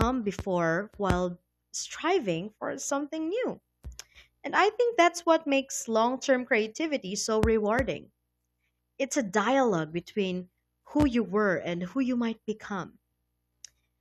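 No technical faults are audible.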